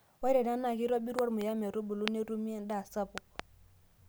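Sharp loud pops cut through the speech: a double pop between 1.19 and 1.43 s, a single one at 2.08 to 2.10 s, and another pair between 3.18 and 3.42 s, peaking about 20 to 25 dB above it. The likely cause is sudden electrical pulses from a switch, plug or static.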